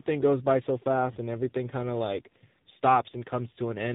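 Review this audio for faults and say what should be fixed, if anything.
Tandem speech coding runs throughout the clip. The speech sounds like it passed through two low-rate speech coders in a row, which fits a G.726 ADPCM link feeding an AMR-NB coder near 7.4 kbit/s. Each coder re-encodes the previous one's damage, so the speech is rough, warbly and muffled, with nothing above 3.8 kHz. To prevent this, keep the call in one codec end to end, or pass the coded stream through transcoder-free instead of decoding and re-encoding at each link.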